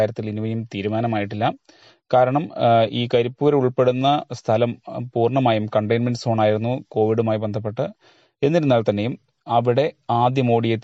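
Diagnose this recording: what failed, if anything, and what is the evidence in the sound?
The network stage failed: the adaptive stream switched to a lower bitrate from 0.99 s to 6.99 s. Codec artefacts rise, then quality recovers abruptly with no gap. This fits a connection slowdown forcing an MP3 rung near 48 kbit/s instead of 128 kbit/s.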